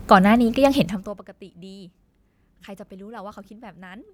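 From 0.75 to 1.21 s there's zipper noise: the speech gets pulled down by about 25 dB in 1 dB jumps instead of a smooth fade, around fifty a second. Each jump clicks, so you hear a fast ticking zip riding on the voice as it drops.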